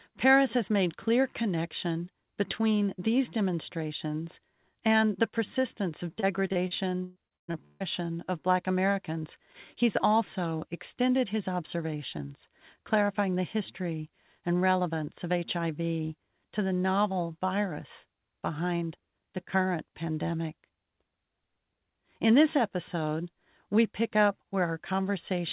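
Speech that has come through a narrowband call path, with nothing above 4 kHz, which fits G.711, shows repeated packet loss (robotic sound) from 6.2 to 7.83 s. Packets went missing again and again, leaving about nine short holes, the longest about 0.15 s. Each hole was patched by stretching the preceding sound, so roughly a third of that stretch is synthetic fill. The result is choppy speech with pieces missing.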